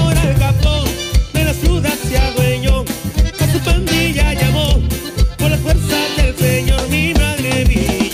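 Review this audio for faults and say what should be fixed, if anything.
No faults turned up in this audio, so nothing needs to be fixed.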